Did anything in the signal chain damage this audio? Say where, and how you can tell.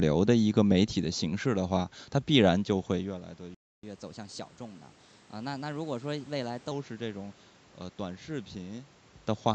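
Yes. At the playback stage, the speech cuts to silence from 3.55 to 3.83 s, a gap of about 288 ms, and then resumes. This playback stall was likely caused by the player's buffer running dry. Unlike a network dropout with concealment, there's no smeared or synthetic filler, just clean silence.

Straight after, from 3.83 to 6.71 s, a catch-up at higher speed runs the speech 1.1 times fast, lifting pitch by about a semitone and a half before settling. Resampling to drain the backlog explains this. A talker shifting near 3 s changes only loudness, never pitch or pace.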